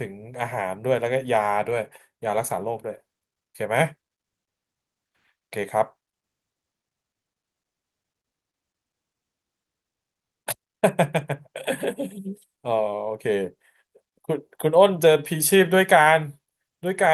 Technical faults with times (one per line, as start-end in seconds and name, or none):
none